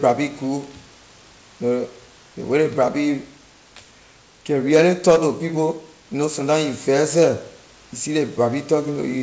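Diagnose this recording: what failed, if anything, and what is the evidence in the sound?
Nothing has failed here: the speech arrives over the call path with its top end stopping at about 8 kHz, which fits G.722 at 64 kbps, and the room noise sits about 32 dB below the speech, which is simply the space the microphone was in rather than anything going wrong in the chain.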